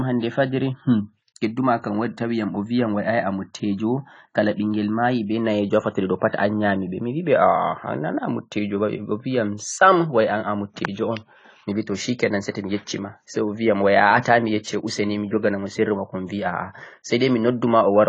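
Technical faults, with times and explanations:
Throughout: AAC compression. Nothing is present above 10 kHz, so the speech loses its air and the sibilants turn dull and smeared, with a swirling, fizzy texture on sustained sounds. This is likely low-bitrate AAC-LC coding, consistent with roughly 24 kbps: with too few bits, the encoder lowers its cut-off and quantises each frame's frequency lines coarsely, leaving gaps in the spectrum that shift from frame to frame and produce the plainly audible warble.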